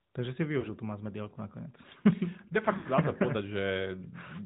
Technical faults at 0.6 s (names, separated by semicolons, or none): AMR narrowband mobile codec; lost AMR speech frames